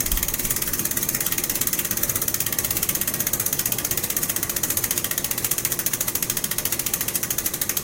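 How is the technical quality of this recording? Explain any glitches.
There's one clear problem, and it kicks in partway through. From 4.34 s to the end you get crude rate conversion: samples were simply dropped or repeated rather than filtered, which fits a 48 kHz to 44.1 kHz change. That leaves a gritty, inharmonic fizz riding the louder, brighter sound, and it's fairly strong, only around ten dB down.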